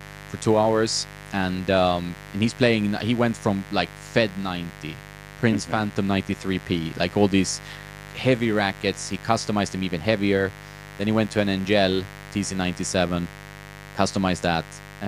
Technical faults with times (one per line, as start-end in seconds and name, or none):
0.00-15.07 mains buzz